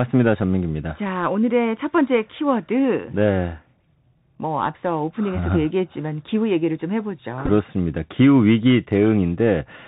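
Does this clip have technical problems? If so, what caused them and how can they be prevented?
Yes, two problems. First, the whole clip has gone through the Bluetooth CVSD headset codec, and the damage is plainly audible. CVSD sends one bit per sample saying only up or down, with an adapting step size. That fits a 64 kbps link. Everything above 4 kHz is gone, s sounds come out scratchy, a grainy hiss sits under the speech, and louder bright moments distort when the step can't keep up. To prevent it, record on a wideband codec such as mSBC or LC3, or use a wired mic.

Second, there's a Bluetooth headset packet repeated glitch from about 7.46 to 7.50 s. Voice packets were lost, and the headset chip decoded the previous packet's bits again to fill the gap. About 18.8 ms went missing, scattered over roughly 30 ms, which fits a handful of dropped packets. The longest back-to-back stretch is around 10 ms. 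Over that stretch the 3.75 ms repeat turns into a brief rough buzz near 267 Hz. You hear a quick buzzy stutter rather than a clean dropout. To prevent it, keep the headset close to the phone, with a clear line of sight and less 2.4 GHz congestion nearby.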